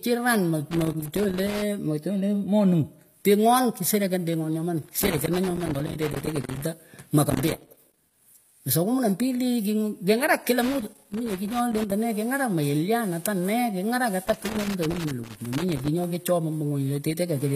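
Throughout the speech there is plainly audible codec damage, likely from HE-AAC compression, which fits a low bitrate of about 24 kbps. Only the lower spectrum is truly coded; the treble is rebuilt by copying lower bands upward under a coarse envelope, so its harmonics don't line up with those below, and s sounds come out gritty or metallic. Unlike plain low-bitrate AAC, which simply dulls the top, this treble extends up to 15.5 kHz, with nothing above that.

Loose connector crackle appears five times: from 0.71 to 1.62 s, 4.82 to 6.62 s, 7.30 to 8.14 s (ending just before "mweswah kumi"), 10.62 to 11.92 s, and 14.25 to 16.04 s. A worn or dirty contact makes and breaks quickly, chopping the signal and popping wherever DC sits on the line. It is heard as irregular bursts of scratching, which sets it apart from the steady, regularly spaced clicks of a buffer or clock fault.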